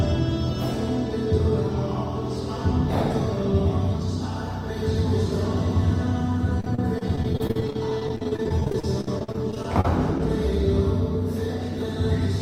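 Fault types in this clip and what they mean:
Repeated packet loss (robotic sound): from 6.60 to 10.20 s, dozens of brief dropouts, none longer than 45 ms, are each filled by extending the preceding sound. About a fifth of that stretch is patched this way, giving a choppy, robotic texture with fragments missing.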